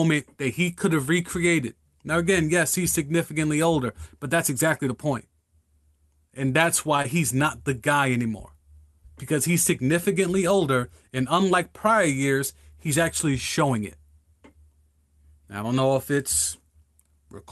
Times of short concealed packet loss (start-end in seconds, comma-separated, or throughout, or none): 7.02-7.06